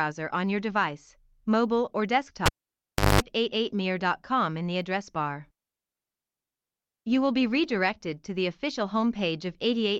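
A speech recording that, right after "your device mobile or" at 2.46 s, pops and drops to near silence for about 0.70 s, then a 50 Hz mains buzz lasting about 0.20 s comes through before a second pop brings the sound back at 3.21 s. That is a cable pulled and plugged in while live: the signal dies when the plug comes out, and the buzz is hum picked up while only the tip makes contact on reinsertion.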